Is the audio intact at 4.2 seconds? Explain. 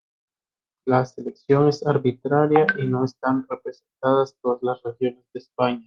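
Yes, the speech at 4.2 seconds is intact, with nothing there beyond the ordinary sound of a call path working normally.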